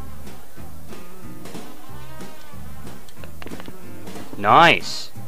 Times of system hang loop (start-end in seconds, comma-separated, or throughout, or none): none